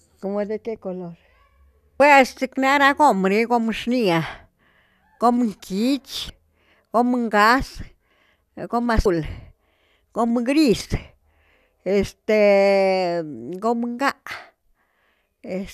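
Speech recording with two short bursts of damaged data in a compressed stream, at 6.27 to 6.30 s and again at 9.03 to 9.06 s. Each lasts about 30 ms. Corrupted bytes make the decoder misread a frame and lose sync until it finds the next valid header, producing a brief artificial blip or gap. On a spectrogram each shows as a narrow vertical disturbance cutting across the speech harmonics. In the waveform it appears as an abrupt, unnatural discontinuity.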